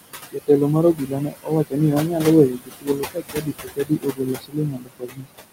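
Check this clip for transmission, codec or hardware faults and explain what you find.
The clip has two faults, both from a noise suppressor; there are no transmission or codec dropouts.

Noise suppressor artifacts run through the whole clip. The room noise sits about 11 dB below the speech, and the suppressor pulls it down by about 18 dB in the gaps, then lets it back up under the speech. It estimates the steady noise per frequency band and attenuates frame by frame.

Speech cut by the noise suppressor occurs four times: 0.32 to 0.49 s (about 19 dB deep), 0.94 to 1.8 s (about 20 dB), 2.07 to 2.26 s (a milder dip of about 6 dB) and 2.49 to 5.27 s (about 21 dB). The suppressor misclassifies low-level speech energy as noise and gates it with the background. Soft consonants and quiet stretches drop out or turn faint, adding up to roughly three seconds of swallowed speech, most of it in the long final stretch.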